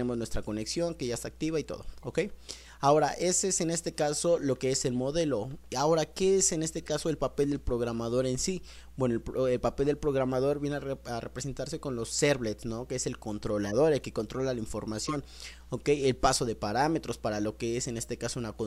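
Five short glitches come from a corrupt frame decoded. Damaged compressed data got played instead of concealed, so misread gains and codes dump energy in the wrong frequencies. The first is a faint blip around 2.00 to 2.04 s, roughly one frame, near -40 dBFS. Then come 6.78 to 6.91 s, 13.64 to 13.75 s, 14.97 to 15.14 s, and 17.97 to 18.08 s, each spanning a few frames. They get louder as the clip goes on, from about -30 up to about -20 dBFS, sounding like squeaky chirps or noise bursts.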